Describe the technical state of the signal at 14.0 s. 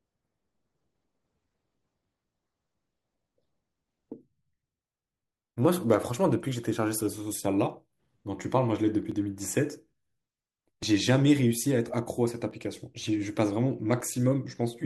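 At 14.01 s the speech jumps forward, with no gap of silence. This is most likely a dropped buffer (overrun): the audio was not read before the hardware overwrote it, so about 15 ms was lost and the two sides were spliced together.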